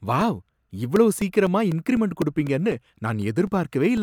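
From 0.21 s to 3.97 s the speech carries periodic USB or driver dropouts: every 0.25 s a stall in the bus or driver drops about two milliseconds of audio and leaves silence in its place. With roughly fifteen gaps in all, the result is a steady ticking under the voice.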